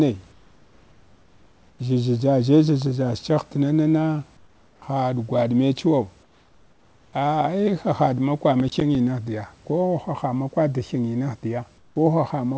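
In this speech clip, the call's discontinuous transmission likely halted sending during pauses, so comfort noise in place of the background fills 0.32–1.79 s, 4.37–4.82 s, 6.23–7.13 s and 11.78–11.96 s, a featureless hiss about 4 to 7 dB quieter than the real room noise. At 8.60–8.95 s the processor missed several buffer deadlines in a row, and the resulting processor overload crackle is a gritty tearing of silent gaps that fits buffers of around 10 ms. Across the clip the call codec's band limit leaves nothing above 8 kHz.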